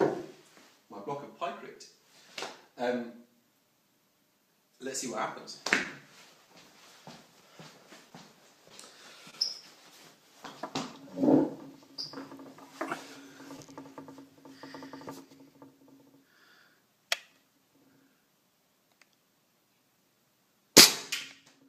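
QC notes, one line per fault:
throughout, clock drift between sender and receiver: small timing hiccups recur at uneven intervals; the sender's clock runs roughly 1.5% slow, so the receiver's jitter buffer keeps draining.
0.20–4.40 s, repeated timing corrections: the receiver repeats short pieces, playing at 98% speed and adding about 70 ms in total.
5.83–9.35 s, scattered short gaps: about seven brief ticks or smears, the longest around 30 ms; each lost or late packet is patched by continuing the last sound.
11.19–21.65 s, repeated timing corrections: short pieces are repeated at uneven intervals to keep pace, running at 99% speed and adding about 150 ms.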